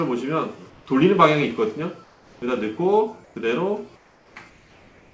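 The sender likely switched to discontinuous transmission during quiet stretches, so the receiver filled them with comfort noise in place of the background, at 0.70–0.86, 2.04–2.42, 3.24–3.36, 3.96–4.36 and 4.50 s to the end. In each gap the real background, about 30 to 33 dB below the loudest parts, becomes a flat, featureless hiss, about 1 to 4 dB quieter than before. Nothing is heard above 8 kHz, which fits a wideband call codec.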